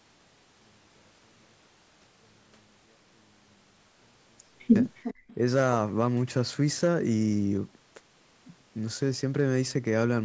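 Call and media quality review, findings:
0.00–4.76 s: speech nearly vanishes in mono sum, about 39 dB down. Likely one channel inverted; common content cancels. Waveform: near-flat mono trace.

5.03–5.35 s: delayed speech copy, 355 ms behind, roughly 15 dB under speech. Likely echo leak past far-end canceller. Spectrogram: weaker shifted duplicate of harmonics.

5.14–5.28 s: room noise dips about 20 dB for roughly 150 ms. Background gated by the echo canceller. Spectrogram: brief dark gap in the noise floor.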